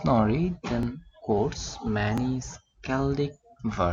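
A repeated buffer occurs at 0.83 s and again at 2.18 s: new audio arrived late, so the same 10.7 ms piece played twice, which fits a 512-sample buffer. Each repeat has a hard join and is heard as a brief click, with essentially no audio lost.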